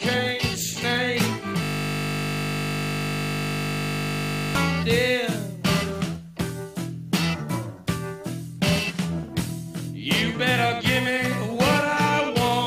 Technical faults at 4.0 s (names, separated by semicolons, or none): system hang loop